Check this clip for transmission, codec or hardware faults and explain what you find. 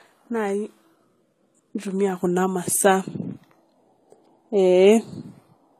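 There's one fault, and it runs through the whole clip: transcoding between lossy codecs. The speech keeps the lowest cut-off in the chain, and a first encode's artefacts sit under a second codec's own artefacts. The chain is likely a very low-rate HE-AAC pass, around 20 kbit/s, re-encoded to AAC-LC near 64 kbit/s. The second codec spends its bits faithfully copying the first one's damage.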